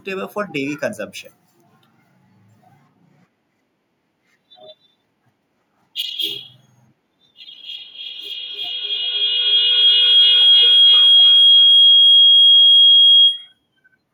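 A feedback howl runs from 7.51 to 13.7 s: a gaining microphone-to-loudspeaker loop rings near 3 kHz, with a loop delay of about 0.3 s, peaking about 14 dB above the speech.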